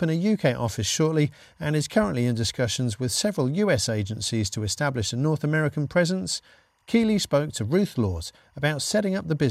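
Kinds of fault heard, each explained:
Timecode bleed: A faint, steady chirping warble runs behind the speech for the whole clip, sitting far below it at roughly 45 dB down and flicking between two pitches near 1 and 2 kHz. The repeating rhythm of the chirps fits 24-frame-per-second linear timecode. That code is a square wave whose pitch toggles to encode each bit, and here it has leaked from a neighbouring track or cable into the audio path.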